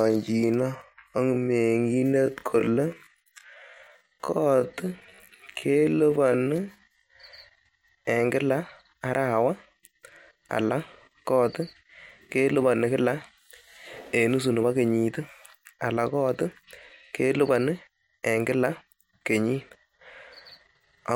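From 0.0 to 7.12 s the speech runs at about 0.59 times normal pace with unchanged pitch, dragging, likely a time-stretched section padded by repeated fragments.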